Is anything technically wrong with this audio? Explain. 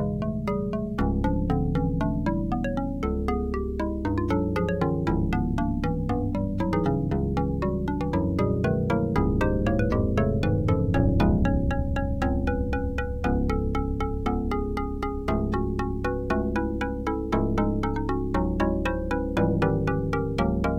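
No, no technical faults heard.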